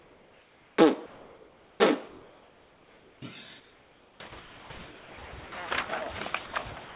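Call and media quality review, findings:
Comfort noise in place of the background, 0.00–0.78 s and 1.06–1.80 s: real background, about 31–34 dB below loud parts, becomes flat featureless hiss, about 2 dB quieter. Likely sender discontinuous transmission with receiver-generated noise.

Sound chopped by the voice detector, 3.60–5.52 s: repeated cutouts, roughly 1.4 s replaced in total. Likely sender voice detector toggling on quiet sound.

Sound dropped by the voice detector, 6.46–6.52 s (60 ms) and 6.84–6.95 s (110 ms): sound replaced by steady noise, likely detector misreading quiet sound as background; band-limited to 4 kHz by the G.711 call path.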